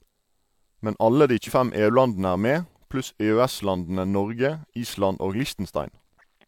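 Just after "alle de", at 1.47 to 1.51 s, compressed frames are skipped. The speech lurches forward by roughly 150 ms, which points to about three 46.4 ms frames missing or rejected. A shorter jump follows "er med" at 3.04 to 3.07 s, around one frame's worth. Unlike a dropout, neither join leaves silence.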